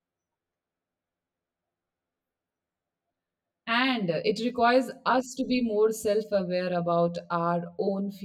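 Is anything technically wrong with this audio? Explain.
Yes. Channel delay (comb filtering) runs through the whole speech clip. One channel arrives roughly 10 ms behind the other, and when the two are summed to mono, the parts of the signal they share cancel at a series of evenly spaced frequencies, the first notch falling somewhere around 40 Hz. Those fixed gaps in the spectrum give the voice a hollow, phasey colour that stays constant from start to finish.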